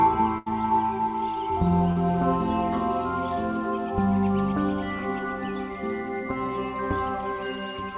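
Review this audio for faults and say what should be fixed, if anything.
At 0.38 to 0.48 s there is a burst of packet loss. About 80 ms of the music never arrived in time, so the receiver kept extending the last sound and turned it down as the gap went on. The music then picks up further along, with that stretch gone. Unlike a brief concealed drop, this gap is long enough to hear the held sound fade, and the music audibly jumps ahead. More jitter-buffer headroom, forward error correction or redundant packets on the link would prevent it.

At 1.92 to 1.98 s there is short concealed packet loss. About 40 ms was missing, and the decoder bridged it by continuing the preceding sound and blending back into the real signal. The result is a quick smear or wobble rather than a fade with a jump. It is too short for the stretched sound to die away, and the music continues without an obvious skip. In-band FEC or packet redundancy would cover losses this short.

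Throughout the clip, the call path cuts everything above 4 kHz, which is normal for G.711 mu-law at 64 kbps.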